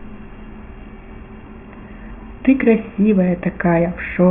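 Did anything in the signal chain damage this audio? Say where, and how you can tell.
No, nothing along the way seems to have harmed this speech; it comes through without any sign of damage from the signal chain.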